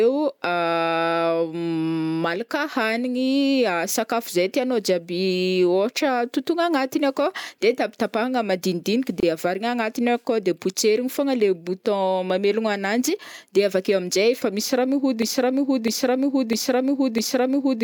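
Two separately encoded pieces of this speech recording were joined without trimming the encoder's start delay and end padding. This leaves a gap at the join of encoded pieces: a 27 ms silence from 9.20 to 9.23 s, its edges smeared, after which the sound resumes where it stopped. Later, the player or stream likely stalled and kept resending the last fragment it held, producing a broken-record loop. From 15.22 s to the end, a 0.65 s piece repeats four times back to back, and the audio that should have played there is lost.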